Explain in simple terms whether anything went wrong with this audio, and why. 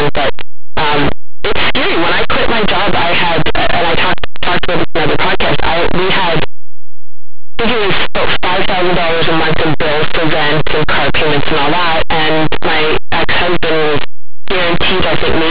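Something went wrong from start to finish: the speech was saved as plain 8-bit numbers, but the player decoded it as if it were mu-law telephone code. This is a case of linear audio read as companded. Tiny values just to one side of silence get turned into the loudest possible sounds, so even quiet moments blare with harsh, very loud distortion. Ordinary 8-bit storage would only add a faint grainy hiss. This is loud and wrecked throughout.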